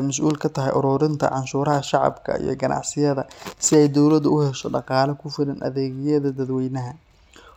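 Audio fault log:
6.46–7.35 s, Bluetooth SBC bit pool drop: just after "dhaqaale ku filan adeegyada" the link appears to have congested, and the sending device cut the SBC bit pool to keep the stream alive. The sound fits a fall from about 31 to 16, near 110 kbps. With so few bits the upper sub-bands are starved and the rest are quantised coarsely, so the speech turns dull and a gritty noise rises for just under a second.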